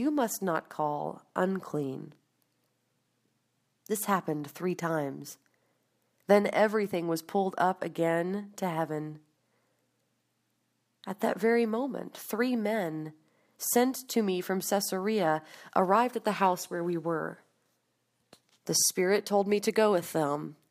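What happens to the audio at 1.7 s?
Nothing goes wrong at 1.7 s; the audio plays through that moment intact, with no dropout, click, distortion or other fault.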